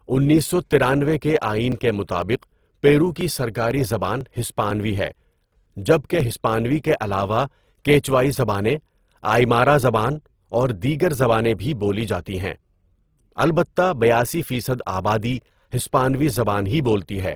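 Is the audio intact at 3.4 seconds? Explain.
No. At 3.4 s the sound falls inside a run of periodic USB or driver dropouts that lasts from 0.73 s to 6.20 s. Something in the background is stalling the USB bus or the audio driver at a fixed interval of 0.50 s, and each stall skips roughly 2 ms of audio. About ten of these gaps are spread across the run. Each skip joins two non-adjacent points in the waveform, which produces a short tick. The ticks form an even rhythm and are heard only while speech is present.

The speech at 3.4 s, like the rest of the clip, also carries plainly audible codec damage, likely from Opus compression. The sound is rough and grainy, and harmonic parts of the speech turn noisy. This fits a music-mode (CELT) encode at a low rate around 16 kbps. That mode keeps each band's energy but fills starved bands with folded or noise content. Bandwidth stays full, with energy reaching about 20.3 kHz, so the damage comes across as graininess rather than muffling.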